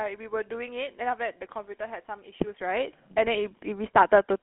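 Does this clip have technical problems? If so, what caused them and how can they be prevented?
Yes. Throughout, the speech has passed through a GSM full-rate codec, which models the vocal tract and drives it with coarsely spaced pulses at a low bitrate, around 13 kbps. The result is a plainly audible buzzy, gravelly roughness, with the band limited to roughly 200 Hz to 3.4 kHz and nothing above 3.8 kHz. To prevent it, record or transmit over a wideband path, such as a wideband or full-band codec, rather than a legacy GSM voice channel.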